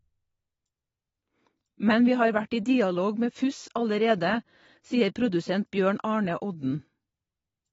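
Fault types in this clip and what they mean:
AAC compression: likely low-bitrate AAC-LC, dulling the speech with audible smearing and warble; a spectrogram shows everything above 7.7 kHz cut away.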